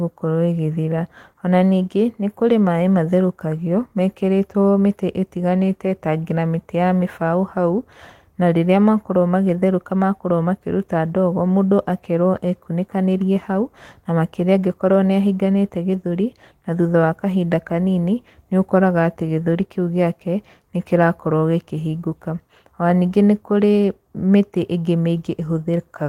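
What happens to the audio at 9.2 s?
Nothing goes wrong at 9.2 s; the speech there plays through intact, with no dropout, click, glitch or other fault.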